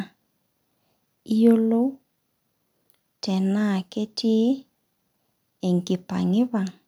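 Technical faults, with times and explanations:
Nothing stood out as a technical fault on listening to this speech recording.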